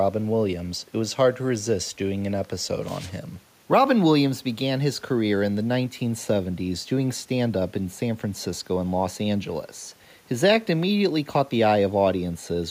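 No technical faults occur at any point in the speech, so there is nothing to place in time order.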